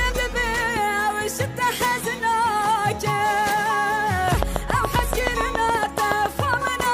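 From 4.28 s to 6.81 s there's a train of clicks: about twenty sharp, same-shaped ticks at a steady 7.1 per second, popping out roughly 15 dB above the sound, gaps included. Likely something injecting pulses, like nearby interference or a faulty connection or power supply.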